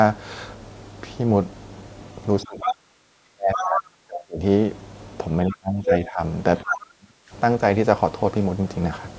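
A speech recording in which the talker's voice sinks in three places: 2.44 to 4.41 s, dropping by roughly 35 dB at its deepest; 5.47 to 6.21 s, by about 20 dB; and 6.63 to 7.31 s, by about 40 dB. This is speech suppressed in double talk, likely an echo canceller ducking the microphone while the far end was also speaking. Inside the first dip, brief scraps of the other side's voice leak through at 2.61 to 2.72 s, only slightly below the talker, and at 3.54 to 3.65 s, somewhat quieter. These are short fragments of a second talker, not a smeared tail of the same voice as room reverberation would give. Nothing above 8 kHz comes through the call microphone processing.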